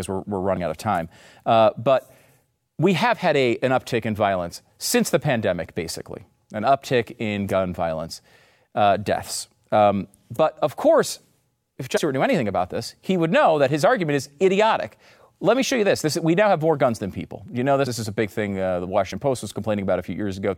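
Speech, with five brief jumps where the sound lurches forward: at 0.56 s, 4.55 to 4.57 s, 11.96 to 11.98 s, 17.86 s and 19.11 s. Each is compressed frames skipped. Whole frames of 23.2 ms never reach playback, so the audio jumps ahead by a multiple of that length. The gaps range from about 20 ms to around 100 ms, the longest at 11.96 s.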